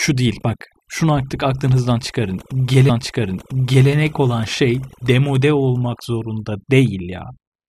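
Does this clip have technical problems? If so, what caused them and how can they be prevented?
Yes. Overdone noise removal runs through the whole speech clip. Bands near the noise estimate were cut almost to nothing, so quiet parts of the voice go with them and the background drops and breaks up into twinkling specks. On a spectrogram these show as isolated flickering dots. Prevent it by using gentler reduction settings.

A stream segment repeated from 2.88 to 3.88 s, just after "artık aklınızdan çıkarın" and before "olan şey demode olmak". About one second was queued twice, with a blip at the jump. The waveform shows a duplicated block. Prevent it by deduplicating segments in the player's buffer logic.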